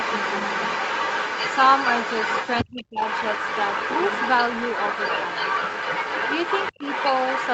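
Other side's voice leaking through runs from 0 to 2.64 s and again from 3.02 s to the end of this speech recording: a second voice sits only slightly below the talker, likely residual loudspeaker echo the canceller failed to remove. Speech suppressed in double talk appears from 2.64 to 3.01 s as a deep drop, and briefly around 6.75 to 6.82 s as a shallower dip, likely the canceller turning everything down while both sides spoke.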